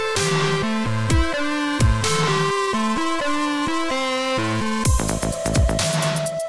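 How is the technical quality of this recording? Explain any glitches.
No glitches can be heard anywhere in this recording.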